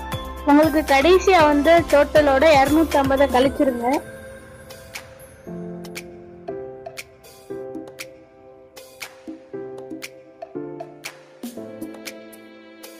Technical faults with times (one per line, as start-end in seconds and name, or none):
none